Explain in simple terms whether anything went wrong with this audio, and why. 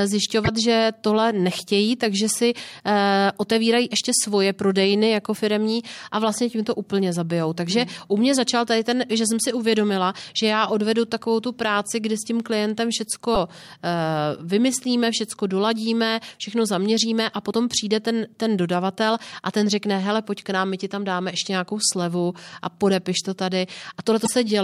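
Five short glitches break into the speech, at 0.43–0.48, 5.32–5.38, 13.34–13.37, 17.49–17.54 and 24.23–24.29 s. This is damaged data in a compressed stream: the decoder hit corrupted bytes, produced a garbled blip, then locked back on. A dropout would sound like silence, and a click like a single sharp tick.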